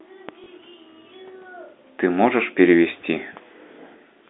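At 0.44 to 0.46 s, a 20 ms gap, the size of one lost packet, was filled by replaying the previous packet. This packet loss with last packet repeated sounds like a small blip.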